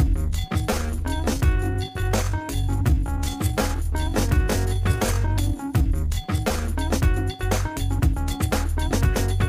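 From 0.00 to 6.64 s the audio plays as a time-stretched section, running at about 0.69 times its normal pace, so everything drags before the pace jumps back to normal. The pitch never drops, which separates this from a slowed playback or sample-rate mismatch, where slowing would also lower the pitch. The likely cause is software lengthening the passage by repeating short pieces of it.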